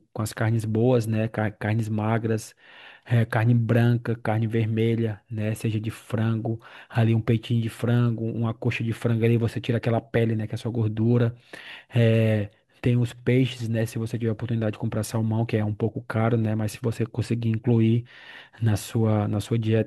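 Nothing goes wrong anywhere in this speech recording, so there's no technical fault to point to at any moment.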